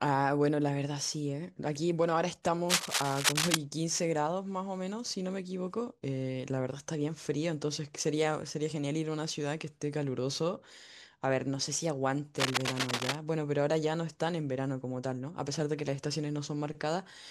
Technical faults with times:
2.69-3.55 cable scratch noise
12.38-13.15 cable scratch noise

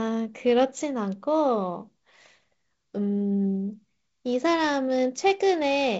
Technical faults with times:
none

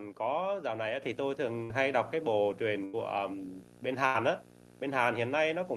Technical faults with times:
0.00-5.77 video or display buzz
1.02 microphone volume stepped up
1.63-1.80 burst of packet loss
2.85-2.97 burst of packet loss
4.06-4.17 burst of packet loss

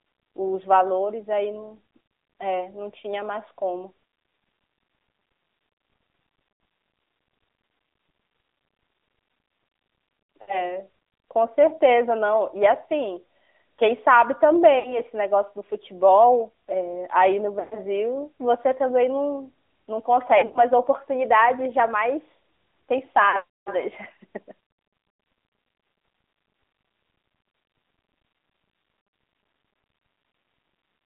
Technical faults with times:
0.00-31.06 AMR narrowband mobile codec
10.42-10.60 lost AMR speech frames
14.80-15.01 lost AMR speech frames
17.60-17.79 lost AMR speech frames
20.38-20.62 lost AMR speech frames
23.30-23.39 lost AMR speech frames
29.98 lost AMR speech frames

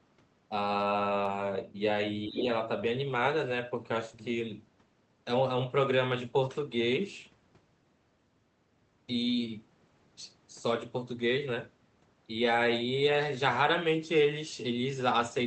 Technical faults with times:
2.28-2.48 speech suppressed in double talk
2.36-2.43 other side's voice leaking through

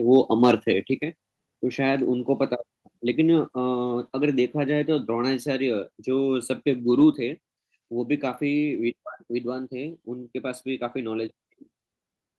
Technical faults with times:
0.13-0.16 microphone overload
0.43-0.54 microphone overload
1.02 microphone volume stepped down
4.08 microphone volume stepped down
7.14 microphone volume stepped down

